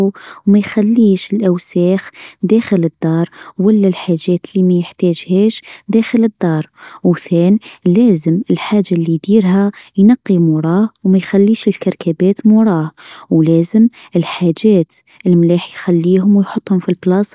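Nothing goes wrong anywhere in this speech recording, so there's no fault to point to at any moment.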